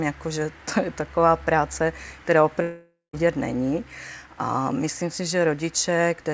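A long network dropout likely cut the stream from 2.62 to 3.15 s, losing about half a second; the receiver stretched the last sound into a fading buzz before the gap reached silence. Across the whole clip, nothing sounds above 8 kHz, which fits a wideband call codec such as G.722.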